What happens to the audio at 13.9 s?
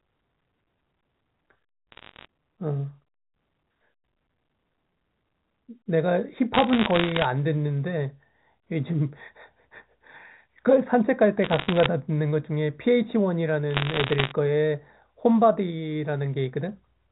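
A burst of sharp ticks and crackle sits over the speech from 13.71 to 14.32 s, with the speech beneath it unchanged. These are bit errors on a digital phone line. At a rate of around one percent, bits in the 8-bit telephone samples were flipped, and each error corrupts a single sample. When a high-order bit, or the sign bit of a loud sample, is hit, that sample jumps sharply and produces a click. Many of these in quick succession merge into crackle.

Throughout this moment, and the rest of the clip, the sound is also hollow and phasey. This comes from channel delay (comb filtering). One channel lags the other by a fraction of a millisecond, and when the two are summed to mono, their shared content cancels at evenly spaced frequencies. The first fixed notch falls around 3 kHz, just inside the telephone band that the G.711 coding carries.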